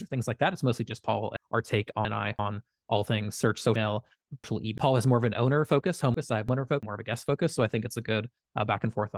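A speech recording with chunks out of order in three places: 1.37–2.39 s, 3.76–4.78 s and 6.14–6.83 s. In each span a segment of about 341 ms plays after material that should follow it. The first two sound displaced by two segments, the third by one. The speech jumbles briefly at the hard joins. This fits late buffer delivery or writing. The clip also carries light Opus voice compression.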